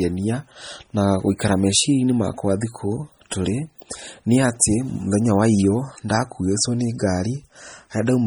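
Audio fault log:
throughout, MP3 compression: heavy, watery swirl and smeared attacks, likely from low-bitrate MP3 around 32 kbps; spectrogram shows flickering holes in the bands and nothing above 20.8 kHz.
3.3 s and 3.78 s, pre-echo: brief hiss just before attacks, after "inĩ makwa thikũ" and before "nĩ atĩ", as block noise spreads backward 18 ms and 12 ms; waveform shows a smear ahead of each onset.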